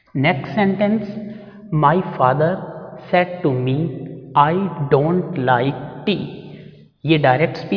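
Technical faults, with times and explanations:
No technical faults can be heard anywhere in the audio. There is nothing here that needs a time or an explanation.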